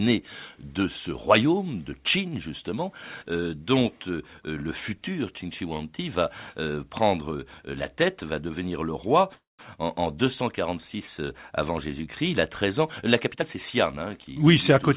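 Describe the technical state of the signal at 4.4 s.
At 4.4 s the speech is intact, with no dropout, glitch or distortion, only the call path's band limit, which leaves nothing above 4 kHz.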